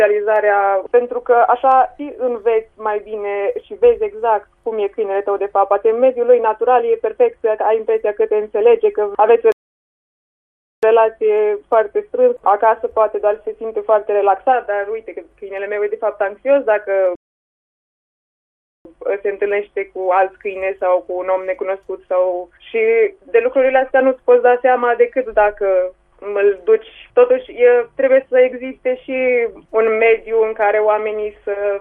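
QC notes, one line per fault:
9.52–10.83 s and 17.15–18.85 s, playback stall: the sound cuts off mid-flow and stays dead silent for about 1.31 s and then about 1.70 s before resuming. The likely cause is the player running out of buffered data, or its output thread being blocked, so nothing reached the output until it recovered. On a waveform both show as flat silent gaps with abrupt edges. On a spectrogram they are empty vertical bands across all frequencies.
14.02–14.28 s, DAB burbling: for about a quarter of a second a burbling texture sits over the programme. Bit errors from weak reception have slipped past error correction into the MP2 data, at a rate of about 0.07 percent. Corrupted samples put short blips of noise in single sub-bands, and corrupted scale factors make sub-bands jump in level, which fits around ten damaged frames. A spectrogram shows blocky, frame-length patches of energy flaring and dropping in isolated frequency bands. 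The waveform shows small irregular bursts.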